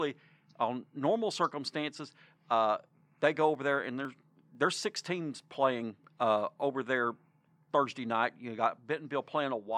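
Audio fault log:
3.55–6.04 s, periodic USB or driver dropouts: from after "circumstances uh they go" until "uh over there", around seven ticks recur every 0.5 s as roughly half a millisecond of speech is skipped outright; their clockwork spacing, unlike random glitches, betrays a blocking background task.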